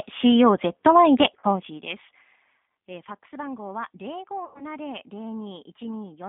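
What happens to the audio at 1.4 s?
From 1.39 to 1.45 s, VoIP packet loss is concealed by the G.729 decoder. About 40 ms of audio goes missing, which fits two lost packets. Unlike a plain dropout, there is no silence. The decoder stretches the last pitch and filter into a fading buzzy tone or coloured noise, and the sound stays weak or distorted briefly afterward.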